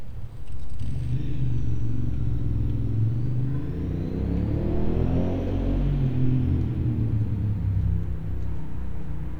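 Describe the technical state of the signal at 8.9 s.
At 8.9 s the audio is intact, with no technical fault present at that moment.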